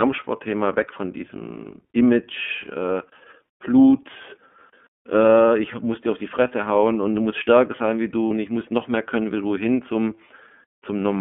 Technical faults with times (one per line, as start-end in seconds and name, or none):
0.00-11.21 iLBC codec
8.28-8.31 lost iLBC frames